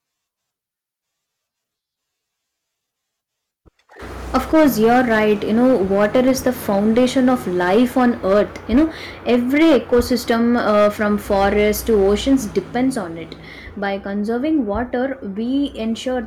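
A gain stage in the speech path was driven past the ceiling it can pass, so hard clipping sliced the waveform peaks flat from 4.35 to 8.84 s, overdriven by about 10 dB, and again from 9.29 to 12.58 s, about 7 dB over, ending just before "on it". The squared-off tops add harmonics high in the spectrum, which gives loud syllables a harsh, buzzy fuzz. The grit is heavier in the first stretch.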